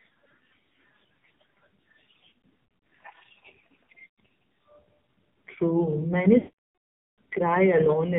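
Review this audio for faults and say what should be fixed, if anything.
The speech runs through the AMR narrowband mobile codec at heavy damage. Nothing above 4 kHz survives, and the voice sounds buzzy and synthetic, which points to a low mode of about 5.9 kbps. The vocal-tract model rebuilds each 5 ms from a few excitation pulses, and at this rate too few bits remain to capture fine detail. Plain band-limiting would leave a muffled but natural voice. The buzz and artificial timbre are what mark a speech codec. Prevent it by using a wideband codec or a higher AMR mode.

Lost AMR speech frames occur at three points. From 2.30 to 2.79 s, short gaps are scattered across about half a second, the longest near 60 ms, giving repeated dips and warbles. From 4.08 to 4.16 s there is one 80 ms drop. From 6.38 to 7.19 s, a run of about 800 ms stretches out the last good sound, fades it to silence within roughly 0.2 s, and then holds silence until the voice returns weak or rough. 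These are radio frames failing their checksum. The decoder repeats the last pitch and vocal-tract settings while lowering the gain. That decaying, drawn-out tone is different from a hard digital dropout or a clicky gap. Prevent it with better radio coverage or stronger error protection on the link.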